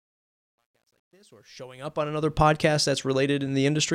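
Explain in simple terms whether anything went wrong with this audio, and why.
Yes, something went wrong: there's truncation distortion on a fade. The speech fades in from the start to about 2.4 s, but the quiet part sounds gritty, worst up to about 1.65 s, likely from a volume stage keeping only about 11 bits without dither.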